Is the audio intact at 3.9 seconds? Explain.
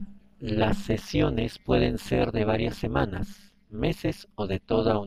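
No. At 3.9 seconds, as throughout the speech, there is overlap-add ripple: the signal was split into windowed frames and rejoined with an overlap whose gains don't add up evenly, so the level dips by about 60 dB once per frame, around 200 times a second. It sounds like a harsh, metallic buzz with extra tones around each note. On a waveform the envelope is chopped into regular pulses. A spectrogram shows evenly spaced vertical striations and sidebands around each harmonic.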